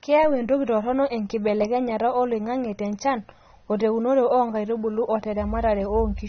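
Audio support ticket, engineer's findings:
Speech dull and smeared for the whole clip, nothing above 6.3 kHz, with warbling, fizzy sibilants. Probable component: encoder, likely AAC compression (AAC-LC) at a low bitrate, fitting roughly 24 kbps. Bits run short, so the top band is dropped and coarse quantisation leaves spectral holes.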